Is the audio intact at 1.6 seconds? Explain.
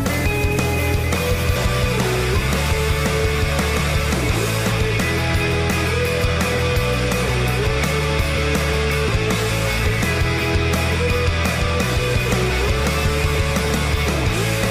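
No. At 1.56 s there is damaged data in a compressed stream: corrupted bytes make the decoder misread a frame and resynchronise, producing a brief chirp or squawk.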